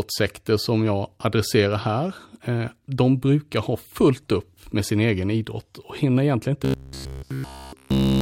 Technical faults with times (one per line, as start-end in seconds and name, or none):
6.65-8.21 robotic sound from repeated short buffers